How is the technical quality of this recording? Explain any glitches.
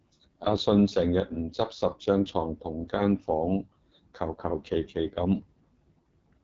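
The technical quality is poor, with one fault running through the whole recording.

AMR wideband (HD Voice) codec, throughout: the speech is squeezed through a narrow vocal-tract model with noise filling the top band, and nothing survives above 7.5 kHz. The heavy rough, raspy texture points to the codec's lowest mode, around 6.6 kbit/s.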